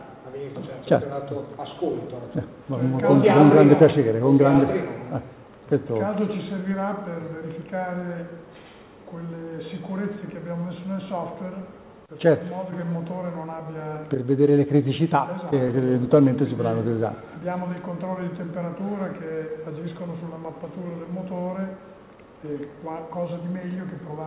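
Right at the start, at 0.56 s, there's a skip ahead: playback jumps forward with no gap filled in, and something like three quarters of a second of audio just isn't there. That stretch was dropped, either on the way or by the jitter buffer, and the two sides were butted together almost directly. You hear it as an abrupt lurch, with the sound on either side joined without any pause.

Straight after, from 0.78 s to 2.47 s, the jitter buffer speed-up kicks in. It's still holding a bit more than it wants, so the receiver trims out tiny slices, a pitch period or a few at a time, over and over. Across that stretch it drops about a tenth of a second, which works out to running about 6% fast. The pitch stays put, but the sound comes across slightly rushed and hurried. All of this rides on a narrowband call path with nothing above 4 kHz, which fits G.711 A-law at 64 kbps.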